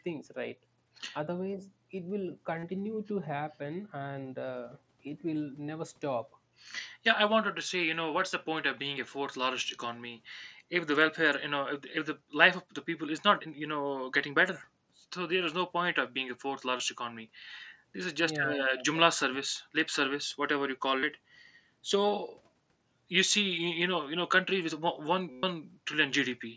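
Speech with concealed Bluetooth headset packet loss at 2.59–2.63, 16.77–16.80, 21.00–21.03 and 25.32–25.43 s. Lost audio was filled by repeating the last stretch of waveform. Each run buzzes at full level, and the 0.11 s run shows as a repeating, undecaying cycle in the waveform and flat harmonic stripes on a spectrogram, with a slight warble where speech resumes.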